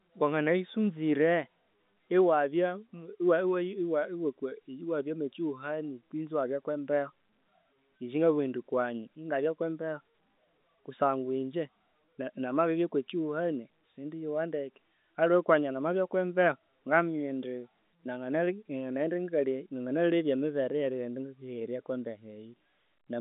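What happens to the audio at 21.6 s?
Nothing goes wrong at 21.6 s: the speech carries on intact through that moment, still in its narrow telephone band with no dropout, click or distortion.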